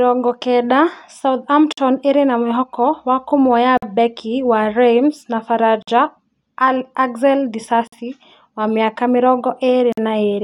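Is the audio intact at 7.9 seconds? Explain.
No. From 7.87 to 7.92 s there is a gap between chunks: a 50 ms hole of silence with abrupt edges, which fits audio delivered in 2-second chunks where the next one started late. What sets it apart from a dropout is that no speech is removed. The sound resumes exactly where it stopped, merely pushed later, instead of skipping ahead over missing material.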